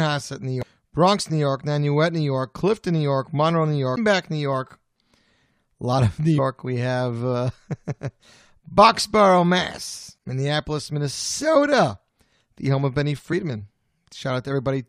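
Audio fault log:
0.62 s, 3.96 s, 6.37 s, 10.16–10.18 s and 13.32 s (just after "the home"), damaged data in a compressed stream: brief glitches where corrupted frames are misread and the decoder loses sync.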